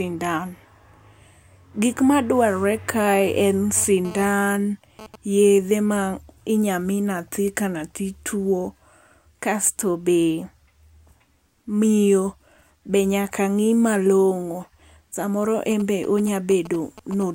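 From 3.77 to 5.16 s, just before "yedhe ma inya", GSM phone buzz: a nearby 2G phone transferring data, its 217 Hz radio bursts rectified into a raspy buzz about 17 dB below the speech, drawn as evenly spaced harmonic lines on a spectrogram. From 15.71 to 17.23 s come GSM signalling bursts, galloping dit-dit-dit ticks and brief 217 Hz buzzes around 15 dB down, showing as clustered vertical stripes and spiky waveform groups.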